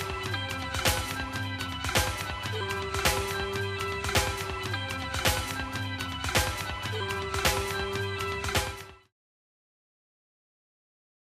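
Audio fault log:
Nothing stood out on listening, and the gentle fade-out that ends at about 9.13 s sounds like a deliberate edit.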